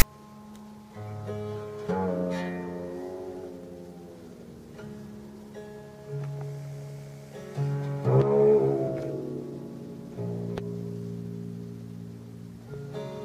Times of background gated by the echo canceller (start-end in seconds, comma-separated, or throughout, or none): none